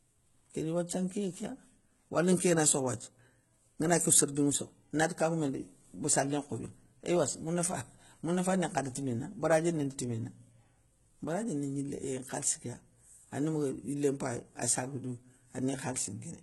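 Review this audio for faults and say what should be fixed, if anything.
Throughout the clip, the treble sounds synthetic, and nothing reaches above 11.8 kHz. S sounds come out gritty and lispy. The likely cause is HE-AAC compression. The top band is rebuilt from copied lower bands, so its harmonics misalign. The heavy damage fits roughly 16 kbps. To prevent it, encode at a higher bitrate or with a full-band codec.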